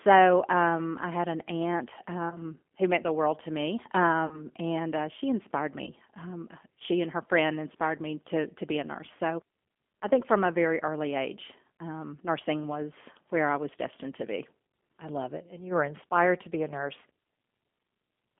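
A speech recording heard through the G.729 codec, its band held to roughly 250 Hz to 3.4 kHz, with plainly audible rough, synthetic texture from rebuilding speech from a vocal tract filter and a few pulses per frame, which fits an 8 kbit/s G.729A coder rather than simple band-limiting. VoIP packet loss concealed by the speech codec strikes three times: after "I had an aunt" at 2.30–2.42 s, after "the world to me" at 4.27–4.47 s, and after "and uh she inspired" at 5.84–5.92 s. Each gap fits about 20, 40 and 30 ms of missing audio. Unlike a dropout to silence, the decoder stretches the last pitch and filter into a buzzy, fading tone, and the weakness lingers after the lost stretch ends.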